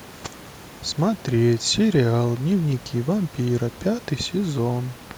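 There are no technical faults to describe in this speech, only faint room noise sitting about 24 dB below the voice.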